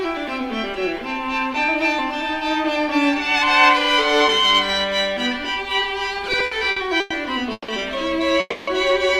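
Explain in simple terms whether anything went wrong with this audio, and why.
From 6.05 to 7.12 s the sound drags and hiccups ten times. These are repeated stalls (stutter): sound data kept arriving late, so the player filled about a quarter of that stretch by stretching what came before, with nothing lost.

At 7.52 to 7.70 s and again at 8.40 to 8.69 s the sound briefly hangs, fades, then resumes. These are call audio freezes, likely from data held up in transit, adding short pauses rather than cutting anything out.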